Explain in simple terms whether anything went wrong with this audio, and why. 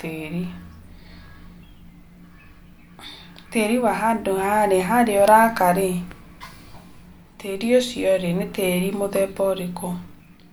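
Nothing went wrong here: the recording carries no audible technical faults, just the speech as it was captured.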